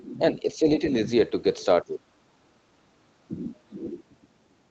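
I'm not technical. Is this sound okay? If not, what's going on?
No. The speech drops out twice, from 1.83 to 2.06 s and again, longer, from 2.24 to 2.84 s, sinking almost to silence each time. This is likely speech suppressed in double talk: both sides talked at once, and the call's echo canceller, unable to tell this voice from returning loudspeaker echo, turned it down. A network dropout would cut off abruptly instead; here the voice is pushed down rather than chopped out.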